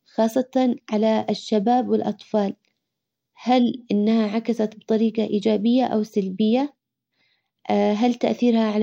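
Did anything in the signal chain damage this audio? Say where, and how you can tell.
No, nothing stood out on listening to this speech recording that would point to damage anywhere in the signal chain.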